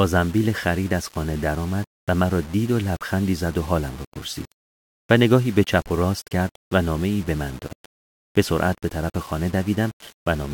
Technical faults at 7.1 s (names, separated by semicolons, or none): low bit depth without dither